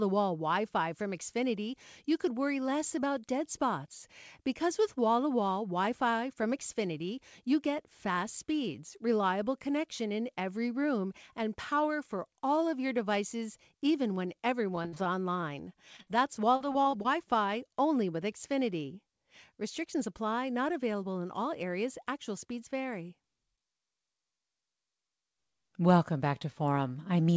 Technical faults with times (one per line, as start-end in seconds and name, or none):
14.76-15.44 repeated packet loss (robotic sound)
15.96-16.08 short concealed packet loss
16.56-17.06 repeated packet loss (robotic sound)